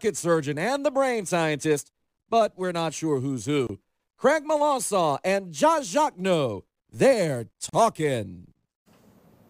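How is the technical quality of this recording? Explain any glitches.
The speech has two brief silences. At 3.67 to 3.69 s (about 24 ms) and 7.69 to 7.73 s (about 40 ms) there are gaps at joins of encoded pieces, 4.0 s apart. Each separately encoded segment kept its start-up delay and padded last frame, so silence opens with smeared edges. Unlike a dropout, nothing is missing: the speech resumes exactly where it stopped.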